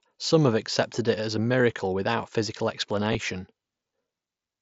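At 3.13 s, concealed Bluetooth headset packet loss patches a 15 ms gap, fitting two dropped packets, with repeated waveform: a short buzzy held tone with a small warble where real audio returns, seen as a brief copied stretch.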